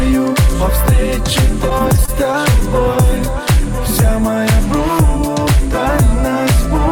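Late-arriving packets repeatedly emptied the jitter buffer from 1.69 to 2.62 s, causing repeated stalls (stutter): ten gaps of up to 21 ms, each filled by extending the preceding sound, make the audio drag.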